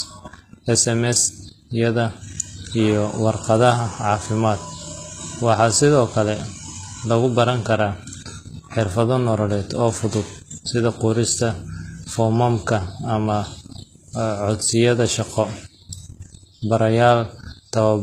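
Throughout the speech, the treble sounds rebuilt rather than real, with plainly audible damage and nothing above 14.9 kHz, likely HE-AAC compression at a low bitrate near 20 kbps.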